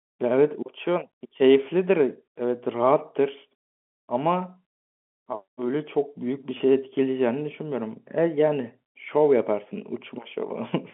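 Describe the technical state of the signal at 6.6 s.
At 6.58 to 6.60 s there is a packet loss with pitch repetition. About 20 ms of audio is missing, which fits a single lost packet, and the receiver bridged it by repeating the last pitch period, heard as a brief, slightly held, buzzy tone in the narrowband G.711 speech.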